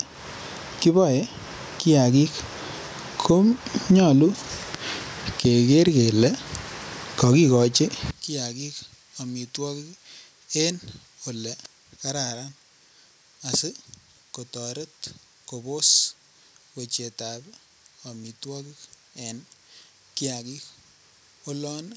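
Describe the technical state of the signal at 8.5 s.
At 8.5 s there's gain pumping: the gain swings by something like 15 dB, the likely result of a fast limiter clamping down on a mic gain set far too high. Loud and soft parts get squashed together.

On top of that, from 8.11 s to the end, one channel is inverted. The level drops by about 22 dB, most likely because reversed polarity on one side cancels the shared centre content when summed to mono. The speech goes faint, and the call processing passes nothing above 8 kHz.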